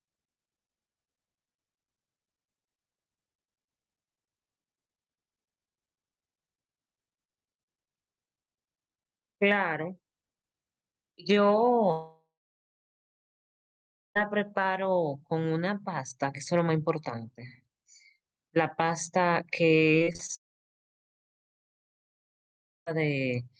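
At 11.91 s the speech cuts out until 14.17 s, a long network dropout that is likely the cause. The last sound smears into a brief fading buzz, then nearly two seconds of silence follow before speech resumes with that stretch simply gone. From 19.91 to 20.31 s comes repeated packet loss (robotic sound): six short holes, none longer than about 24 ms, each filled by stretching the previous sound, so roughly a third of that span turns choppy while speech keeps running through it. Unlike a dropout, nothing goes silent there. That distinguishes it from the second long network dropout, likely the cause again, which follows at 20.35 s and lasts to 22.88 s. This time almost the whole two and a half seconds is dead silence after only a trace of fading tail. Throughout, the call codec's band limit near 12 kHz takes the top off the high frequencies.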